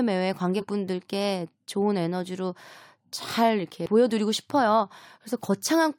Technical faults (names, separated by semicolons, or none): compressed frames skipped